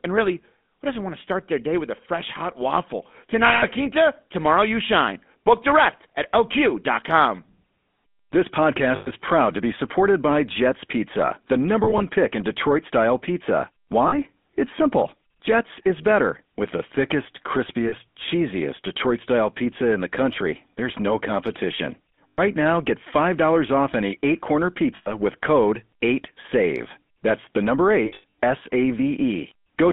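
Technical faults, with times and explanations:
Throughout: GSM full-rate codec. Plainly audible buzzy, gravelly roughness from pulse-driven vocal-tract modelling. The band of about 200 Hz to 3.5 kHz and the texture fit 13 kbps GSM.
3.46–3.65 s, 8.96–9.10 s, 11.84–12.02 s (just before "pick in"), 14.08–14.14 s (just after "style pizza"), 17.88–17.94 s, 22.28–22.40 s (between "country there's no competition" and "now get"), 24.96–25.13 s, 28.06–28.32 s: lost GSM frames. Missing frames are filled by repeating the last good frame, so the sound hangs as a rough metallic ring for 40 to 200 ms. The 11.84 s and 28.06 s events are broken into short scattered dropouts, with the longest run at 28.06 s lasting about a tenth of a second.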